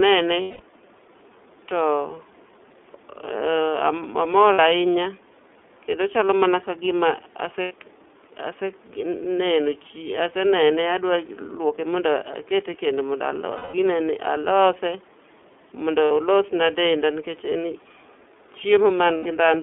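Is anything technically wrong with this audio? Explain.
Yes. The whole recording has passed through the iLBC codec. The line band runs from about 250 Hz to 3.5 kHz, and the 30 ms frame rhythm points to iLBC's 13.33 kbps mode. Each frame's excitation is coded on its own, which leaves the speech clear but plainly rough and slightly synthetic. On a spectrogram there is almost no energy below 250 Hz or above 3.5 kHz, and the harmonics look grainy and smeared.

Lost iLBC frames appear at 0.42, 4.53, 7.62, 13.56, 16.05 and 19.17 s. They last 180, 60, 90, 180, 60 and 90 ms, which fits losses of two to six 30 ms frames. The one at 16.05 s comes just before "olos na denda nikech". During each gap the decoder repeats the last pitch cycle mixed with noise and fades it over the longer losses. This sounds like a held, buzzy, breathy vowel. The waveform shows a periodic stretch that shrinks in level in the longer gaps, and the spectrogram shows flat, frozen harmonics. 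Normal speech returns almost immediately afterward.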